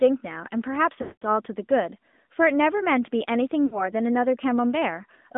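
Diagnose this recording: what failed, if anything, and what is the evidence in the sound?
The failure is at the codec stage: the speech has passed through the AMR narrowband mobile codec throughout. Its energy sits between about 200 Hz and 3.6 kHz, so a spectrogram shows a hard ceiling with nothing above it. The codec rebuilds the voice from a vocal-tract filter driven by sparse pulses, which gives it a plainly audible buzzy, synthetic edge. That degree of damage fits a mid-rate mode of around 10.2 kbps.

At the network stage, lost AMR speech frames interrupt the sound twice: from 1.02 to 1.23 s, and again from 3.66 to 3.85 s. The first gap lasts about 200 ms, which fits roughly ten consecutive 20 ms frames. The decoder repeats the last good pitch and filter settings at falling gain, so the sound smears and dies away. The waveform shows a decaying envelope into near-silence. The second gap is shorter, about three frames, and is heard as a brief, drawn-out fade.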